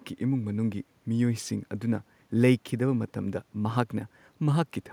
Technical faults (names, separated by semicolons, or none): none